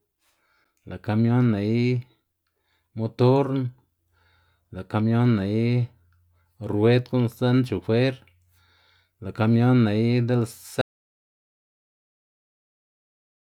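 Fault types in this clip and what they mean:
Audio dropout to silence: speech stops dead at 10.81 s and pure silence with no room tone runs to the end, unlike a fade; likely lost input.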